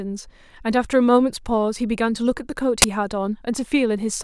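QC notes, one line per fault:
2.82–2.84 s, uninitialised buffer: a sudden, loud crack of harsh digital noise cuts into the speech for 20 ms, then the speech resumes as abruptly as it was interrupted. The playback side read out a block of memory before any audio had been written into it, so whatever leftover data sat there was treated as samples. Those values bear no relation to the speech, hence the abrupt, loud, noisy burst filling exactly one 20 ms block.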